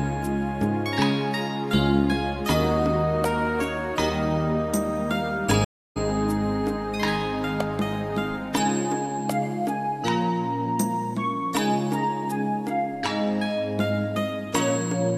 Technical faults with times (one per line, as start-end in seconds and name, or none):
5.64-5.97 stream reconnect